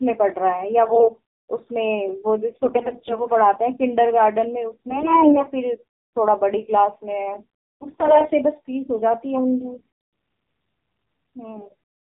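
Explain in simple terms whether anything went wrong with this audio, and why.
The speech sounds muffled, buzzy and robotic throughout. That is the AMR narrowband mobile codec, an old phone format that drops everything above 4 kHz and rebuilds the voice cheaply.

Short hoarse, scratchy, gargling bursts appear at 0.88–1.12, 2.51–3.25, 4.71–5.49, 7.82–8.34, 9.74–9.86 and 11.54–11.74 s. These are AMR bit errors: a weak link scrambled fine details while pitch and loudness survived.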